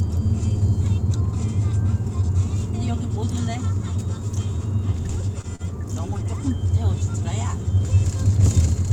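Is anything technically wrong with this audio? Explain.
Yes, there are two short stalls from a late packet, at 5.41–5.47 s and 5.56–5.62 s. Packets arrived late and the jitter buffer emptied, so the receiver held the last sound for about 21 ms and then 35 ms before resuming. Nothing is lost, but the sound briefly drags with a faint buzz or dip.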